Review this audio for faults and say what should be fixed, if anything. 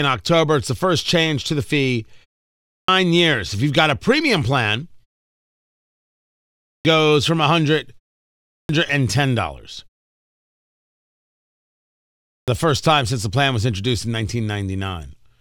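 Clipped start after a pause at 2.54, 6.47, 8.36 and 12.11 s: the sleeping output wakes late, losing 0.33–0.38 s, so waveforms leap from flat silence into mid-onset energy. Keeping the output device active through pauses, without letting it sleep, would stop it needing to wake before speech resumes.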